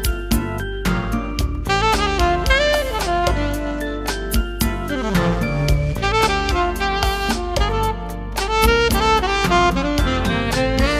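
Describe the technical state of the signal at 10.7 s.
At 10.7 s you're still hearing the mains hum that sits under the whole clip: a steady 50 Hz drone with a few low harmonics stacked on top. It's pretty prominent, only around 10 dB down from the program material, so it's hard to miss. That's the power line leaking into the signal path, most likely via a ground loop or some nearby transformer coupling into the cabling.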